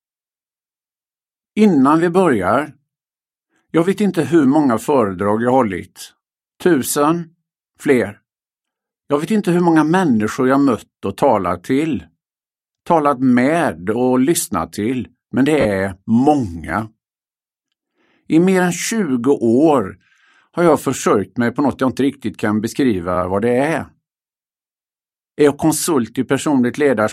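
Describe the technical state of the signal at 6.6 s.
At 6.6 s the signal is intact, with no dropout, distortion or other audible fault at that point.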